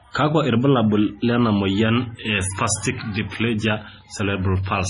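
Throughout the speech, the sound is watery and swirly, with nothing above 10.6 kHz. This is likely heavy MP3 compression at a low bitrate, around 24 kbps. Short of bits, the encoder cuts the treble and drops weak frequency lines that flicker between frames.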